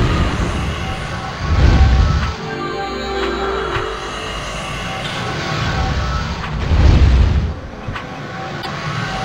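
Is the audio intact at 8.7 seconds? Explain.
No. Damaged data in a compressed stream disrupts the audio from 8.58 to 8.67 s, ending just before that moment. Corrupted bytes make the decoder misread frames and lose sync. It then hunts for the next valid frame header. The result is a brief glitch, a chirp, squawk, click or short hole.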